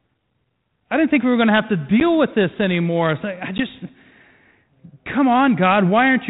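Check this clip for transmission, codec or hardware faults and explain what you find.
Two short dropouts stand out, both packet loss on an ADPCM call. The audio is band-limited telephone speech with only light coding hiss, which fits G.726 at 32 kbit/s.

From 2.00 to 2.04 s, just after "going to have to", and from 3.58 to 3.62 s, right after "with this anymore I", a single packet of about 10 ms goes missing and is filled with silence. On the waveform each gap is a flat, hard-edged hole. The spectrogram shows a clean vertical blank band. The decoder's predictor and step size lose track of the sender's during the gap, so the sound resumes slightly distorted. This settles within some tens of milliseconds.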